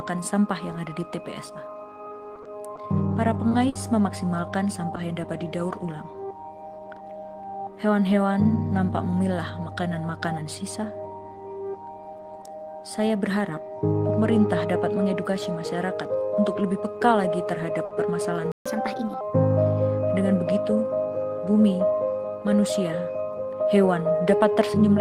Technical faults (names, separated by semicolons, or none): repeated packet loss (robotic sound); short stall from a late packet; playback stall; catch-up at higher speed; jitter buffer speed-up